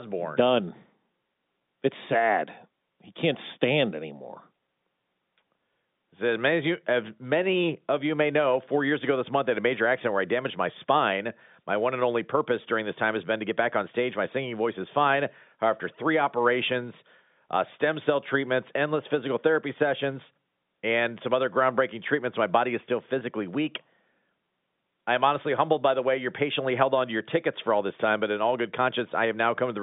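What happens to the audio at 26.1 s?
Nothing goes wrong at 26.1 s; the speech carries on intact through the telephone band of the G.711 line, with no dropout, click or distortion at that point.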